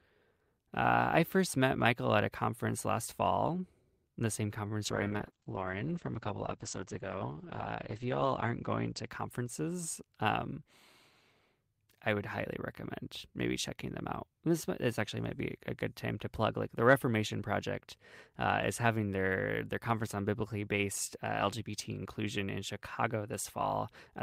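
A call bitrate drop runs from 4.86 to 10.57 s. The squeezed encoder budget, consistent with a cut from about 40 to 9 kbps, makes the speech coarse and watery, and the top end narrows from 20 kHz to 8 kHz, muffling it for 3.4 s.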